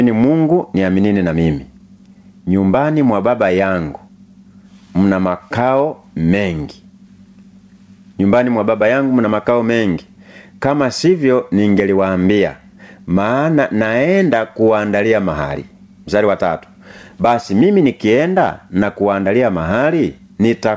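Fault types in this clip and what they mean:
Gain pumping: the level ducks around 10 dB under loud speech, likely from gain set too hot feeding a fast limiter.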